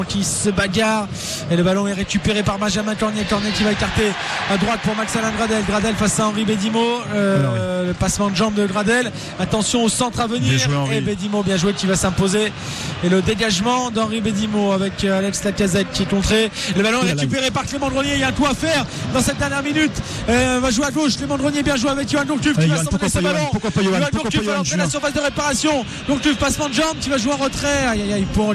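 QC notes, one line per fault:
No faults detected.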